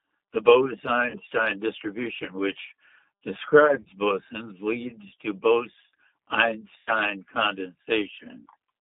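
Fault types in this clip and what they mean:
G.729 codec: the whole clip sounds like an 8 kbit/s G.729-style VoIP codec. It rebuilds speech from a vocal tract model and sparse pulses, so it's plainly rough and a bit synthetic, and it's band-limited to roughly 250 Hz to 3.6 kHz.
VoIP packet loss concealed by the speech codec: in three spots the decoder covers lost audio by stretching its last pitch and filter into a fading buzz or coloured noise. These are at 1.10–1.19 s just before "distribution which", 3.66–3.88 s as scattered short dropouts before "bosons leads to", and 6.78–6.91 s.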